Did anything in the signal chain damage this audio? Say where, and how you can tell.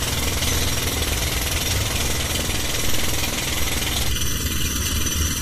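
Yes. Throughout, the sound is dull, with nothing above 14.2 kHz and layered smearing artefacts, likely from transcoding between lossy codecs, such as successive Vorbis and MP3 encodes.

From 4.09 s to the end it turns hollow and phasey, with fixed notches starting near 700 Hz. That is comb filtering, from one channel arriving under a millisecond late before mono summing.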